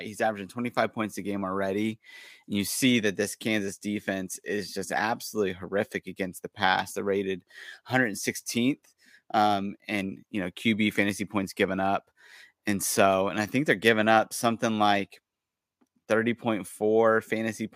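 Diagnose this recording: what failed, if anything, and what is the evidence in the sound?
Nothing in this speech recording points to a failure at any stage, so there's no fault to diagnose here.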